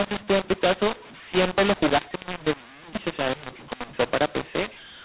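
From start to finish, the speech has a mu-law and A-law mix-up. It was coded as A-law G.711 at 8 kHz but decoded as mu-law. Levels come out scrambled. The speech sounds harsh and distorted, and pauses fill with noise.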